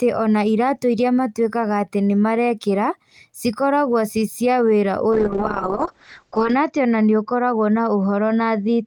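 A speech clip with a call bitrate drop. It starts at 5.12 s, right after "cia wĩra", and lasts to the end of the clip. The call's bandwidth estimate fell, so the encoder was given far fewer bits. The sound turns rough and watery, which fits a fall from about 32 kbps to about 6 kbps. The top end narrows from about 20 kHz to about 8 kHz, so it sounds muffled. The worst stretch lasts about 1.4 s.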